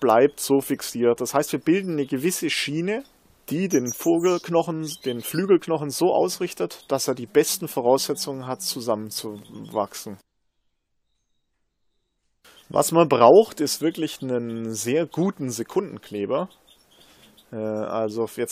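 No technical faults can be heard.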